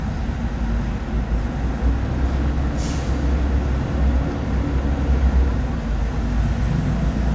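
No technical faults can be heard anywhere in this audio.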